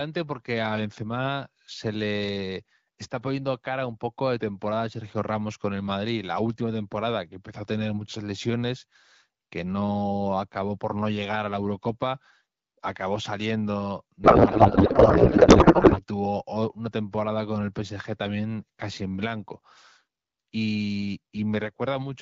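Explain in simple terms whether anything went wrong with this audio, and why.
Something does go wrong in this speech recording: from 14.24 s to 16.01 s, right after "acabó saliendo", the speech turns into garbled noise and warbling that barely follows the talker. This is a codec payload misread. The phone system compresses the voice with the AMR wideband (HD Voice) codec. Here the receiving end unpacked the bits in a different layout from the sender, so the decoder rebuilt nonsense. Clean speech returns at "tuvo una temporada con".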